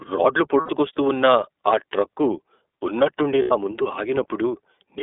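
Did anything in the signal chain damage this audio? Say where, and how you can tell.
Yes. At the codec stage, the whole clip of speech went through the iLBC codec. The band stops at 300 Hz and 3.6 kHz, and the voice has a rough, synthetic edge that fits iLBC's 30 ms frame mode at about 13.33 kbps.

At the network stage, there are lost iLBC frames at 0.6 to 0.7 s, just before "ఉన్న ఆ ట్రక్కు ఉన్నట్టుండి", and at 3.42 to 3.52 s, between "ఉన్న ఆ ట్రక్కు ఉన్నట్టుండి" and "నా ముందు". The decoder repeats the last pitch cycle with noise, giving a held, buzzy vowel for about 90 ms. Each gap fits three missing frames.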